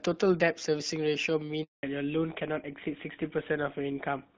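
At 1.63 s the speech falls silent for 200 ms, until 1.83 s. This is a handover gap: while the call switched networks, no speech frames arrived. Unlike packet-loss concealment, nothing fills the gap, so it is clean silence rather than smeared or repeated sound.

From 1.83 s to the end, everything above 4 kHz is gone. This is a fallback to narrowband. The earlier wideband sound, with light coding damage that fits HD Voice at 12.65 kbit/s, gives way to a duller, rougher timbre that fits an older full-rate codec. Unlike a plain low-pass filter, the cut begins exactly at the handover and adds coarse codec texture.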